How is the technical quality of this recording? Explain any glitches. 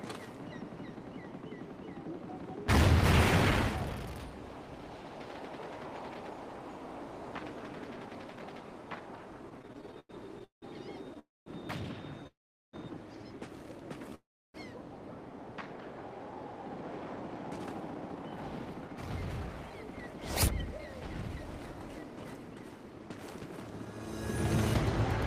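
The recording has clear network-delay problems from about 9.5 s on: a stutter, three freezes and a stretch of hurried playback.

From 9.49 to 10.64 s there are repeated stalls (stutter): 14 short gaps, the longest 177 ms, filled by continuing the last sound. Packets arrived late, so the jitter buffer kept emptying. It drags and stutters; a spectrogram shows smeared, repeated frames covering about a third of that span.

Call audio freezes occur at 11.19–11.48 s (270 ms), 12.27–12.75 s (462 ms) and 14.15–14.56 s (394 ms). The likely cause is held-up packets draining the buffer. Each time the last sound buzzes briefly, then goes silent for 210, 400 and 330 ms. A waveform shows flat gaps.

From 16.62 to 24.07 s a jitter buffer speed-up plays the sound about 12% fast at unchanged pitch, trimming roughly a second of backlog by repeatedly removing pitch-period slices. It sounds hurried; a spectrogram shows compressed timing with intact harmonics.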